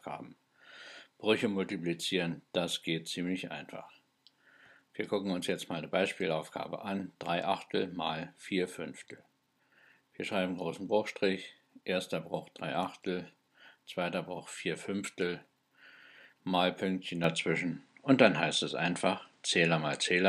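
At 17.24 s the sound abruptly narrows and stays that way to the end: nothing above about 9.8 kHz, the level shifts roughly 5 dB, and a faint new noise floor appears, with no gap. It's likely an input switched to a poorer device.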